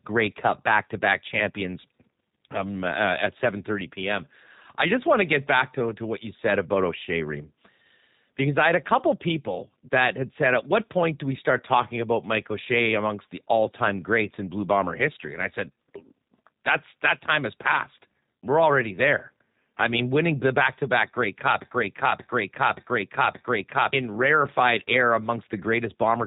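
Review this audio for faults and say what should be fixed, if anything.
Throughout the clip the speech sounds slightly rough and synthetic, and everything above about 3.8 kHz is gone, so it is muffled and dull. This is plainly audible G.729 codec damage. The audio was rebuilt from a vocal tract filter, a pitch predictor and a few pulses per 10 ms frame, which fits 8 kbit/s G.729A. To prevent it, record or transfer the audio over a wideband codec, or keep an uncompressed copy, instead of routing it through a narrowband VoIP path.

From 21.62 to 23.93 s a 0.58 s fragment plays four times back to back. This is a broken-record loop, and the audio that should have filled that stretch is missing. The playback or streaming chain likely stalled and kept resending the last fragment it held instead of passing on new audio. To prevent it, monitor the stream for stalls and have the player output silence or resynchronise rather than repeat its buffer.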